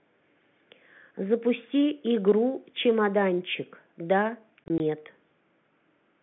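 From 4.64 to 4.8 s, there is packet loss filled with silence. About 60 ms of audio drops out, scattered across 160 ms. Each gap is 20 ms, which fits three lost 20 ms packets. The holes have hard edges, over an otherwise narrow G.711 telephone band.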